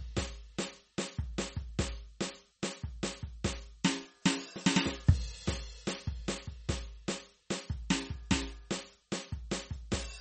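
A music clip with MP3 compression damage running the whole way through: the treble stops dead at about 8.4 kHz, and the sound has that watery, swirly quality, likely from an encoder starved of bits, which fits something around 34 kbps.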